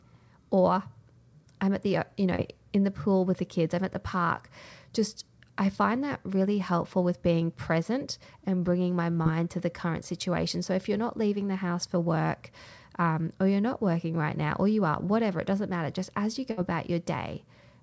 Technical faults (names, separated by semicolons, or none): short concealed packet loss; burst of packet loss